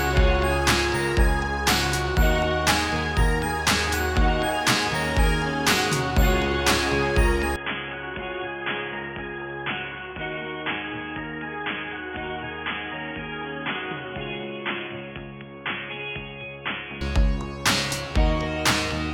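The audio changes character abruptly at 7.56 s and stays that way until 17.01 s. It turns dull and boxy, with nothing above 3.4 kHz. The level drops by about 10 dB. A faint new background noise appears, far below the signal. There is no gap at either change. This points to an input switched to a poorer device, likely a headset's call profile or another microphone with a narrower band. Full bandwidth returns at 17.01 s.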